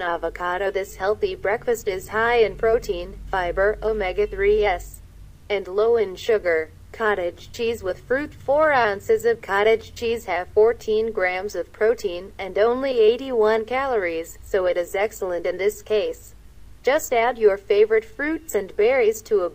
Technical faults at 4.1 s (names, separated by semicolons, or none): none